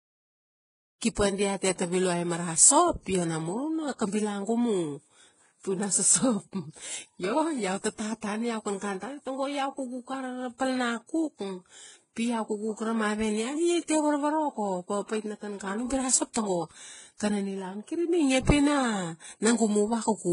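Throughout the speech, two kinds of smeared, metallic artefact overlap and nothing sounds above 10.6 kHz, likely transcoding between lossy codecs: low-rate HE-AAC re-encoded as Vorbis.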